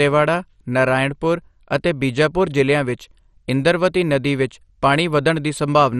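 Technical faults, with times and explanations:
Throughout, MP2 compression: dull, gurgling speech with granular distortion and nothing above 13.1 kHz, likely from heavy low-rate Layer II coding switching off upper sub-bands.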